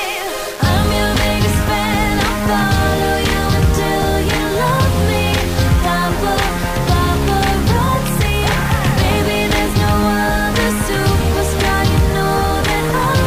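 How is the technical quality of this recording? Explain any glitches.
Poor: grainy distortion runs through the whole recording, most likely low bit depth without dither, rounding to about 5 bits and leaving error only roughly 20 dB below the sound.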